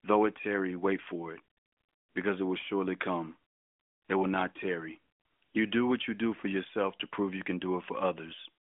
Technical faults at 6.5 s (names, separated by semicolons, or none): none